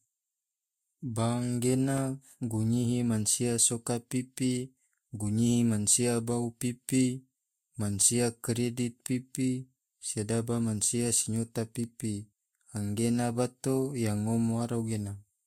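At 1.98 to 2.00 s, just before "gunyihi mansia soka pipi", a single loud pop rises about 5 dB above the speech, likely from a voltage step or pulse.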